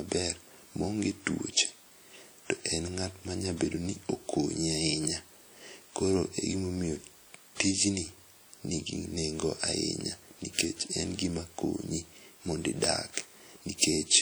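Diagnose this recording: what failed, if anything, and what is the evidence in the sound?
The codec stage likely introduced WMA compression damage: throughout, the speech rings and smears with hiss breathing alongside it, even though content still reaches 20.1 kHz.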